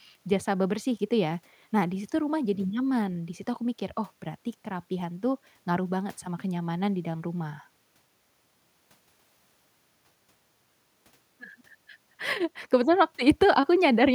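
No technical faults can be heard anywhere in the speech recording. Nothing along the way points to a problem in the signal chain.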